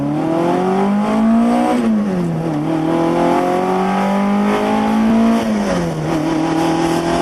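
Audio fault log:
Nothing stood out on listening to this clip.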